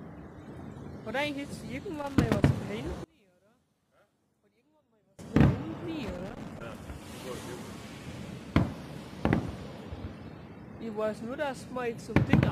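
From 1.99 to 2.45 s, loose connector crackle breaks out as an irregular burst of scratching, where a worn contact makes and breaks as it moves, chopping the signal. The waveform shows jagged gaps and spikes; the spectrogram shows broadband vertical streaks.

Between 3.04 and 5.19 s the sound collapses by about 30 dB to a faint residue, the likely cause being one channel inverted so that the shared content cancels when the channels are summed to mono. The waveform shrinks sharply, and the spectrogram thins out, losing most of its energy.

The loose connector crackle returns from 6.03 to 6.89 s, again as ragged, irregular scratching, with the same spiky waveform and scattered broadband streaks on the spectrogram.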